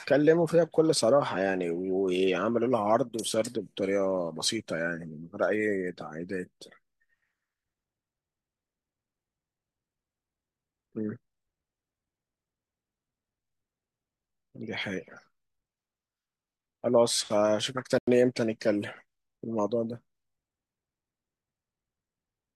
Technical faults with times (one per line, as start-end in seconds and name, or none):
17.98-18.07 Bluetooth stall